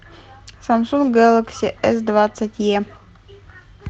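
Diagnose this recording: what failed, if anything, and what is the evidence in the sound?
At about 1.05 s, one packet was lost on the network and rebuilt from error correction. There is no silence or click. Instead, a single 20 ms frame turns briefly rougher and noisier, then clean coding resumes. Opus in-band FEC causes this: the next packet carried a coarse low-bitrate copy of the missing frame, and the decoder played that copy. Plain packet-loss concealment sounds different. It guesses the missing audio from earlier frames, so it gives a smeared, buzzy or repeated-pitch extension that fades out. Here the frame follows the real sound, only with degraded detail. Because the call runs at about 8 kHz bandwidth rather than full band, there is no extra dip in the top end during the rebuilt frame. The cut above 8 kHz throughout the recording comes from the Opus call path, and its coding noise fits a bitrate around 24 kbps.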